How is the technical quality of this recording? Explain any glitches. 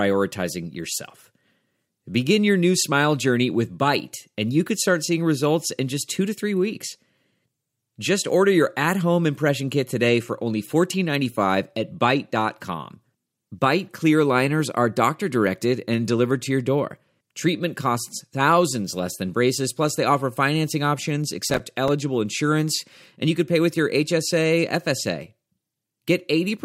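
There is one glitch. From 21.50 to 21.88 s, between "they offer financing options" and "insurance and you could", processor overload crackle tears through the speech. Several buffers of about 5 ms each missed their deadline and dropped to silence, leaving hard-edged gaps that sound like gritty crackle.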